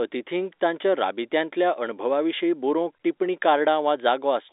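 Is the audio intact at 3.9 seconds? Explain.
Yes, the speech is intact at 3.9 seconds, with nothing there beyond the narrow, band-limited sound of ordinary G.711 telephone coding.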